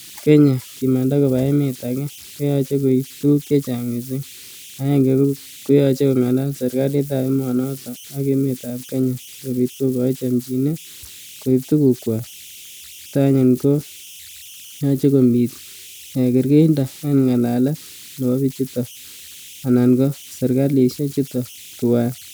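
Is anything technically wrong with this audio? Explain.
Yes. Throughout the speech, converter idle tones are present: an undithered delta-sigma converter settles into repeating bit patterns when the input is small. Here that leaves tones near 3 kHz, heard as whistles, buzzy chirps or rough hiss in pauses and grainy noise under quiet passages, about 23 dB below the signal.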